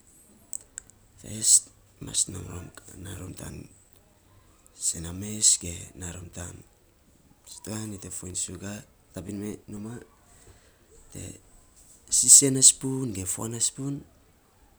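CD scratch ticks run from 2.92 to 4.63 s and again from 8.30 to 10.50 s. Once per disc revolution, a scratch destroys more data than error correction can rebuild, so the player patches the gap, leaving brief, regular ticks about four or five times a second.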